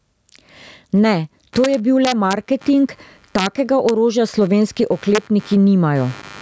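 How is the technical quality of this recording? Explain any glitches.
The recording has three distinct problems: the level pumps throughout the speech, a computer-generated buzz joins partway through, and several harsh digital cracks break up the loud passages.

Gain pumping runs through the whole clip. The gain swings by roughly 15 dB, pulling loud and soft parts closer in level and squashing the sound. This is likely from the input gain being set far too high, with a fast limiter or compressor squashing each peak back down.

Computer activity noise starts at 1.53 s and continues to the end. It is a faint buzz pulsing at around 100 Hz, sitting roughly 35 dB below the speech. It follows the computer's load rather than the speech, because changing current draw from the processor, graphics or peripherals disturbs the ground the audio circuit shares.

Integer overflow produces violent cracks from 1.64 to 2.33 s, from 3.39 to 3.47 s, at 3.89 s, and from 5.15 to 5.18 s. 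They are far sharper than ordinary clipping. Peaks pushed up to about 2 dB past full scale were not limited. Instead they wrapped around to the opposite sign, so each overshooting sample jumps across the whole range.

The call's microphone processing also shows in the band limit, with nothing above 8 kHz.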